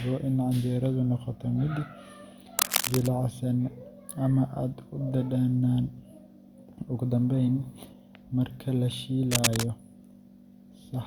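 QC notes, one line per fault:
2.59–3.07 s and 9.31–9.64 s (after "marka la"): cable scratch noise. A worn cable, connector or control was likely shifted, making its contact resistance jump erratically, which adds dense, ragged bursts of scratching about as loud as the speech over each span.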